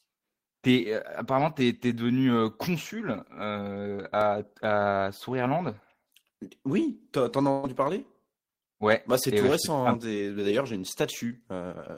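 From 4.00 to 4.64 s there are four CD scratch ticks. A blemish on the disc defeats error correction once per turn. The player patches the damaged samples. The longest tick lasts only a couple of milliseconds, at about six per second.

At 7.51 s a burst of packet loss begins. The receiver stretches the last sound for about 117 ms and fades it into a buzz or hiss. It ends at 7.66 s. About 120 ms of speech is gone.

From 7.87 to 8.94 s six more CD scratch ticks follow. They are even shorter, the longest about a millisecond, at roughly the same rate.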